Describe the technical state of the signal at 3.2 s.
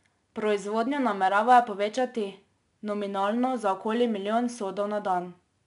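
At 3.2 s the speech carries 4-bit ADPCM compression, present across the whole clip rather than at this moment alone. Each sample is coded as a coarse 4-bit step from a prediction, so the error rides up and down with the signal: a gritty hiss on louder syllables and roughened onsets. On a spectrogram, a broadband noise haze tracks the speech energy and everything stops sharply at 10.6 kHz, which fits a sample rate near 22 kHz.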